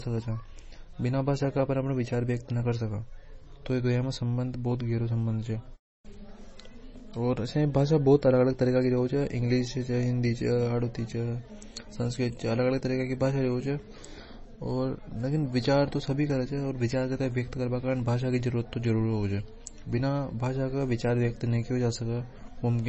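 MP3 compression throughout: nothing above 8 kHz, with watery, swirling speech and chirpy s sounds, likely from a starved encoder; the heavy damage fits roughly 24 kbps.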